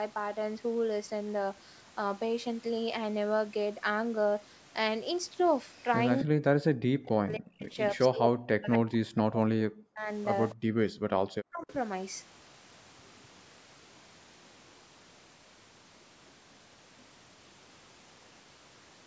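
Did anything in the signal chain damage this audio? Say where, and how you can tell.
Yes, it's the call processing, specifically the echo canceller. The speech gets pushed way down, roughly 40 dB at worst, from 6.23 to 7.74 s, 7.92 to 10.08 s and briefly 11.46 to 11.7 s. That's likely speech suppressed in double talk, with both ends talking and the canceller ducking the loudspeaker side's voice along with the echo.

There's also an echo leak: a faint delayed copy trailing the speech by 262 ms, at about 25 dB down at 10.5 s and about 30 dB down at 11.61 to 11.72 s. Likely the far end's loudspeaker getting into its mic and the canceller not fully removing it.

Then the background gated by the echo canceller: the room sound drops about 40 dB from 10.55 to 11.17 s, around half a second, while the loudspeaker plays, and comes back when the canceller releases. The mic processing, with nothing above 8 kHz, is just normal call processing.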